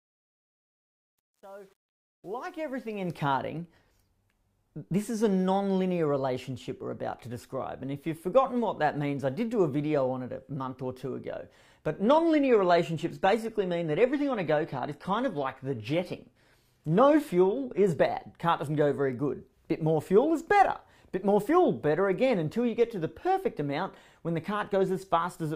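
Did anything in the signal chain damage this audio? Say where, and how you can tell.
Yes. The fade at the start passed through a gain or sample-format stage that kept too few bits and added no dither, so truncation distortion on the fade is audible from 0 to 3.25 s, worst up to 2.61 s. The quiet waveform turns to coarse square steps and sounds gritty, which fits a stage holding only about 9 bits.

The network stage also let the adaptive stream drop to a lower bitrate from 12.02 to 18.02 s. Quality changes abruptly with no gap, codec artefacts rise, and nothing remains above 14.9 kHz. That fits a switch from 96 kbit/s AAC-LC down to 24 kbit/s HE-AAC while the connection slowed.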